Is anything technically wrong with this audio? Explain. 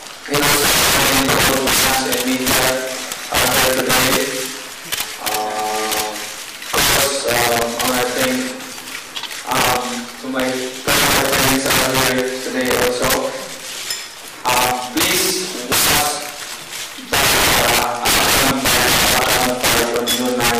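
Yes. Integer overflow runs through the whole clip. A gain stage or summing point pushed the signal about 17 dB past the top of the integer range, and instead of being limited, each sample beyond that ceiling wrapped around to the opposite extreme. Several percent of samples cross the limit, so every loud peak flips abruptly across the full range. The result is violent, harsh cracks on louder passages, far sharper and more jagged than ordinary clipping.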